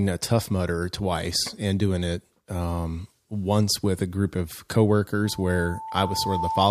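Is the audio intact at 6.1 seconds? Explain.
No. At 6.1 seconds the speech is caught in loudspeaker feedback squeal, which runs from 5.25 s to the end of the clip at 6.71 s. The microphone is picking up the loudspeaker it feeds, and at 887 Hz the loop gain tops one, so that tone feeds on itself. It swells over roughly a second until it sits about level with the speech. A single steady pitch that grows on its own marks it as feedback rather than a constant mains hum or a brief whistle.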